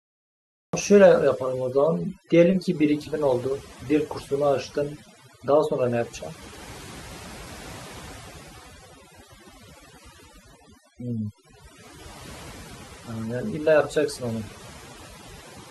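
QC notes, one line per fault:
throughout: overdone noise removal. The noise reduction was set far too aggressively, so any frequency band sitting near the estimated noise floor gets pulled right down or switched off, and the quieter parts of the speech disappear with it. The background drops to near silence dotted with twinkling specks. On a spectrogram the gaps between words look unnaturally empty, with scattered isolated dots, and the voice's upper harmonics look ragged and patchy.
0.00 to 0.73 s: cut-off start. The audio is pure digital silence until 0.73 s, then the speech enters mid-sound with no natural attack or fade-in, because the recording or stream began late and missed the onset. On the waveform a flat line jumps straight into the speech at 0.73 s, and the spectrogram shows a hard vertical edge where energy begins across every band at once.
5.80 to 9.23 s: computer activity noise. 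A buzzy, chirping interference pulsing at around 300 Hz sits roughly 35 dB below the speech. Its timing follows the computer's activity, not the speech, as load changes disturb the shared ground of the audio circuit. On a spectrogram it appears as a band of evenly spaced harmonic lines that switch on near 5.8 s and off near 9.2 s, unrelated to the speech's own patterns.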